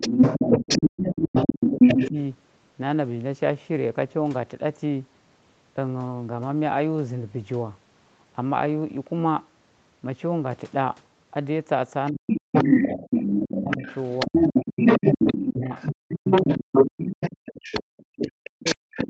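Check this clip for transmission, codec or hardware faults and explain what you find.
Two related echo-control faults are audible in this speech recording, both tied to the far end of a call bleeding into the microphone path. The band tops out near 8 kHz, consistent with call microphone processing.

Other side's voice leaking through occurs from 0.0 to 2.1 s, from 12.07 to 17.83 s, and from 18.17 s to the end at 19.1 s. A second voice sits under the talker. In the first two stretches it is somewhat louder than the talker, and in the last it is roughly level with them. The likely cause is a loudspeaker on the talker's device playing the far side back into its own microphone, with the echo canceller leaving a residual that gets transmitted along with the near speech.

Speech suppressed in double talk shows at 0.37 to 2.17 s, 12.11 to 13.85 s, 14.26 to 14.37 s, 14.99 to 17.15 s, and 17.96 s to the end. 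Each of these overlaps the leaked voice. During these spans the talker's level collapses, by something like 30 dB in the first and a deep 40 dB or so in most later ones, while the brief 14.26 s dip is shallower. This is likely the canceller failing to separate near speech from echo and attenuating both together.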